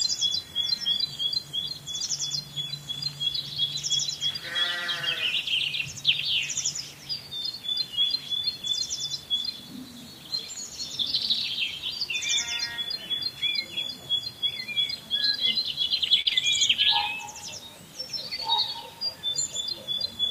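A short stall from a late packet comes at 16.21 to 16.27 s. A packet had not arrived when it was due, so the jitter buffer ran dry and the receiver held the last sound for about 38 ms until the packet turned up. Playback then resumed from the same point, so no audio is lost, but everything after it sits 38 ms later than before. It is heard as a brief held or stretched moment with a faint buzz or dip.

Short concealed packet loss follows at 16.29 to 16.33 s. About 20 ms of audio never reached the decoder in time, and the receiver covered roughly 19 ms of that gap by extending the preceding sound before blending back into the real signal. The result is a quick smear or wobble just after the stall.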